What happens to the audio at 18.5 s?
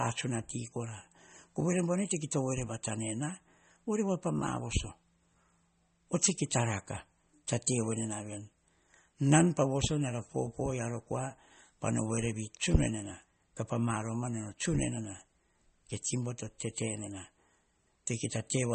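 MP3 compression damage is present at 18.5 s, as it is throughout the speech. Nothing reaches above about 8.4 kHz, a fixed treble cut-off consistent with a low-bitrate encode of around 32 kbps, which is the likely cause. With so few bits, the encoder discards weak frequency lines that flicker in and out from frame to frame, giving a plainly audible watery, swirly texture, metallic chirping on s sounds and smeared consonant onsets.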